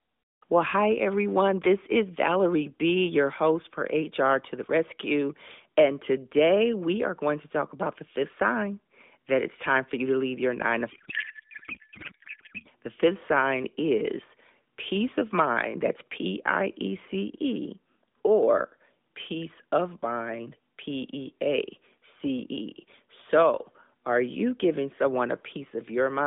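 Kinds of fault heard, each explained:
Codec payload misread: the two ends disagree on how the AMR bits are packed, so from 10.92 to 12.69 s the decoder accepts plausible frames whose parameters sit in the wrong positions. The speech gives way to garbled noise and warble that barely tracks it, consistent with octet-aligned AMR being parsed as bandwidth-efficient. Before and after, the narrowband AMR path carries the speech with only light codec coloration and nothing above about 3.6 kHz.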